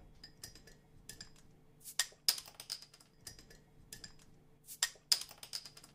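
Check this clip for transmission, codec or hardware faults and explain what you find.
I hear nothing wrong anywhere in this audio.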